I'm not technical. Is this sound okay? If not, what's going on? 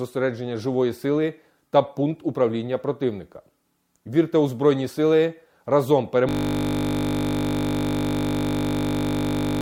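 No, it isn't. At 6.29 s the speech stops and turns into a steady buzz that lasts right to the end of the clip. That's a system hang loop: the computer froze, but the sound hardware kept replaying the same tiny 20 ms slice of audio over and over. Repeating 50 times a second, that slice blurs into a flat 50 Hz drone instead of a stutter.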